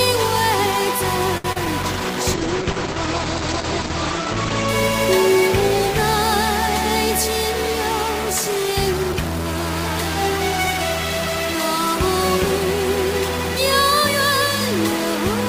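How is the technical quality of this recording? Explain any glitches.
Quality's pretty rough, with a distortion running the whole way through, plus a cluster of network glitches packed in right near the start.

The constant distortion, which also hisses through the quiet gaps, is most likely a stuck bit: one data bit is pinned, so about half the samples land off by a fixed amount.

At 1.37 s there's a short stall from a late packet. The jitter buffer ran dry, so the receiver held the last sound for about 69 ms, then carried on with nothing lost.

Two short concealed packet losses follow, at 1.52 to 1.58 s (40 ms gone, smeared over) and 1.66 to 1.68 s (20 ms gone). Each is a quick smear or wobble where the receiver patched the gap.

Then from 1.82 to 4.74 s there's a call bitrate drop, from 32 down to 10 kbps. The bandwidth narrows from 20 kHz to 8 kHz, so the audio goes muffled and watery until it recovers.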